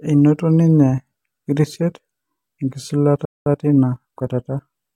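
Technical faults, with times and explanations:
3.25 to 3.46 s, playback stall: The speech cuts to silence in mid-flow for about 0.21 s, then resumes. The player likely ran short of buffered data, or its output thread was held up, so nothing reached the output until it recovered.
3.46 to 4.80 s, time-compressed catch-up: Right after the gap, the speech runs about 1.15 times faster at its normal pitch. The player is clearing its backlog by dropping small slices and cross-fading the joins.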